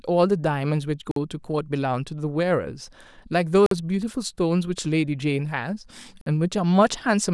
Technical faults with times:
1.11-1.16 gap between chunks
3.66-3.71 gap between chunks
6.21-6.26 gap between chunks

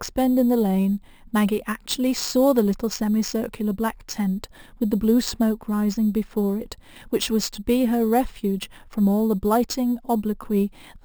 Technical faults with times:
0.00-11.05 imaging from sample-and-hold upsampling

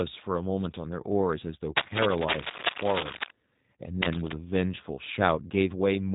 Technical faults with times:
0.00-6.15 G.729 codec

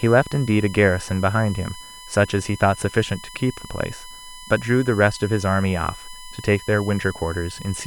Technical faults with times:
0.00-7.87 USB whine

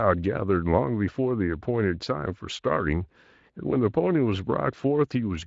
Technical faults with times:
none

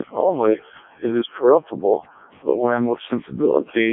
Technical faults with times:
0.00-3.93 Codec 2 vocoder

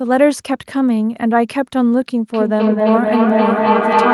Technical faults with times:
2.34-4.14 feedback echo between two devices

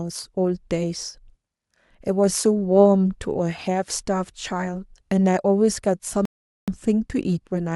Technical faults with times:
6.25-6.68 rebuffering stall

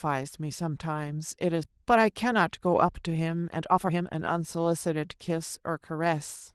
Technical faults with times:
1.63-1.65 skip ahead
1.76-6.13 jitter buffer speed-up

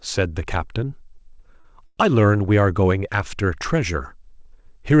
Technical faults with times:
1.16-1.99 repeated stalls (stutter)

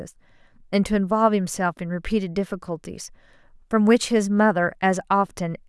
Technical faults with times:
none

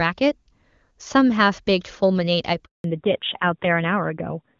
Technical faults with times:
2.64-2.84 handover gap
2.84-4.60 fallback to narrowband

